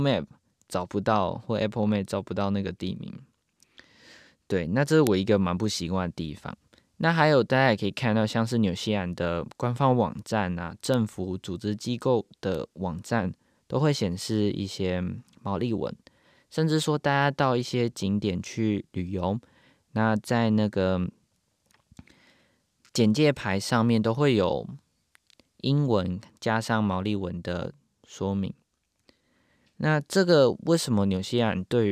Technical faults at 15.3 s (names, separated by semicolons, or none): none